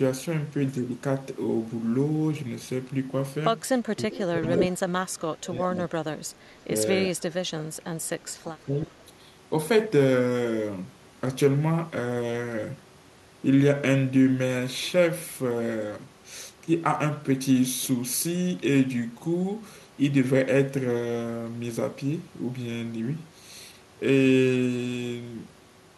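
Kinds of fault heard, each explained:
Speech suppressed in double talk: The speech dips and breaks up from 4.04 to 5.94 s and again from 7.1 to 8.95 s. In each window, around a second and a half is pulled down, at its deepest by about 20 dB. This is likely an echo canceller that could not tell this talker from loudspeaker echo while both sides spoke, so it attenuated everything. On a waveform the envelope shows notched, ragged dips. A spectrogram shows the upper harmonics thinning or vanishing in patches.
Echo leak: From 4.43 to 4.67 s a second copy of the speech arrives 367 ms behind the original, at roughly the same loudness, so it reads as a distinct repeat rather than as room tone. One side was likely playing the call through a loudspeaker, and its canceller let part of the microphone pickup through. A spectrogram shows the same harmonic pattern shifted later in time and overlapping the direct speech. 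The waveform looks denser and smeared across that short stretch.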